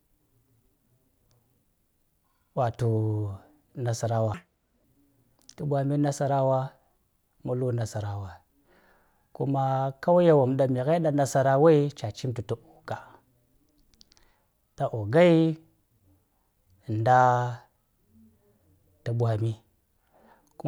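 Audio read two samples at a time (double speed), 4.34 to 4.84 s: pairs of samples taken as single frames make the speech run twice as fast and an octave higher.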